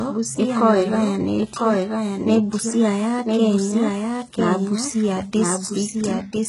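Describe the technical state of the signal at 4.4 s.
At 4.4 s the doubled audio track runs through the whole clip. A second full-band copy of the speech trails the original by about a second, sitting roughly 5 dB lower. It carries no reverberant tail or room colouring, so it sounds like a clean duplicate rather than an echo off a surface. The likely cause is a second, slower capture path or an edit holding two copies out of step.

HE-AAC compression is also present throughout, including at 4.4 s, and the damage is heavy. Only the lower spectrum is coded directly. The treble is synthesised by copying lower bands upward and shaping them with a coarse envelope, and nothing is reproduced above 11.1 kHz. The rebuilt top end is not the original, and its harmonics fail to line up with those below, so sibilants come out gritty, metallic or lispy, which fits a very low bitrate of around 12 kbps.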